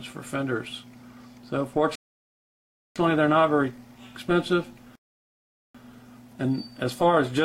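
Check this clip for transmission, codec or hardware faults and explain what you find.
The player ran dry twice, causing two rebuffering stalls: from 1.95 to 2.96 s and from 4.95 to 5.75 s. Each time, playback halted until more data arrived, leaving silent gaps of about 1.0 s and 0.79 s. The sound then resumed exactly where it stopped, adding time without losing any audio.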